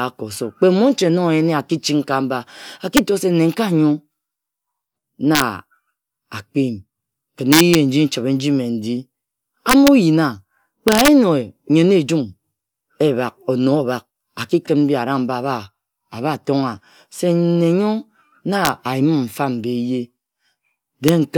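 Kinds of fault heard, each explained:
Integer overflow: loud speech peaks pushed about 1 to 4 dB past the limit wrap to the opposite sign, giving harsh cracks far sharper than clipping, seven times.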